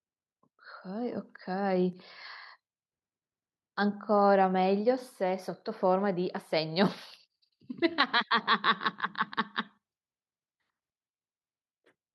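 No technical faults can be heard anywhere in the recording; the signal stays continuous and steady throughout.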